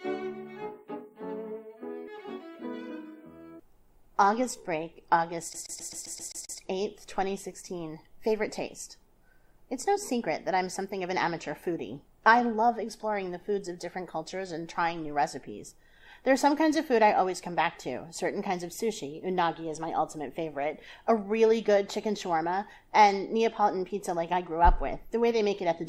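At 2.07 s the sound makes a skip ahead. Roughly 400 ms was dropped in transit or by an overflowing buffer. Both sides join almost seamlessly.

From 2.66 to 3.12 s a jitter buffer speed-up runs the sound at 114 percent. About 70 ms of short pieces was removed, so it sounds hurried at unchanged pitch.

From 5.53 to 6.58 s the CD is stuck on one turn. A 0.13 s stretch repeats eight times, with a brief mute at each jump, making a fast, even stutter.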